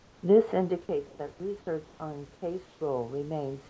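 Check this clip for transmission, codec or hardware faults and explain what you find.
Three kinds of fault can be heard in this speech clip.

Channel delay (comb filtering), throughout: one channel arrives a tiny fraction of a millisecond late before mono summing, cancelling evenly spaced frequencies from around 5 kHz upward, so the speech sounds hollow and phasey.

Comfort noise in place of the background, at 0.00–0.23 s, 1.07–1.19 s, 1.85–2.00 s and 2.66–2.81 s: likely discontinuous transmission stopping in pauses, with synthetic noise filling in. The background turns steady and featureless, about 3 dB quieter, about 3 dB louder, then about 1 dB quieter twice.

Automatic gain rising, from 0.51 s to the end: the gain control found the input about 12 dB too quiet and raised its gain gradually, so speech and background swell together.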